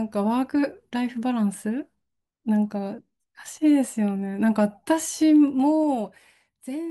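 Zipper noise runs from 5.42 to 6.52 s in this speech recording, as the level falls by about 15 dB. The fade moves in unsmoothed steps of about 2 dB, around ten a second, and each step leaves a small click, heard as ticking.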